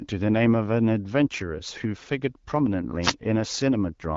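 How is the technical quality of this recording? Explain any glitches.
One glitch stands out: a wireless microphone noise hit from 3.02 to 3.13 s. It is a brief swish of static, about 0.12 s long. It happens when the FM radio link fades as reflected signals cancel, letting receiver noise rise.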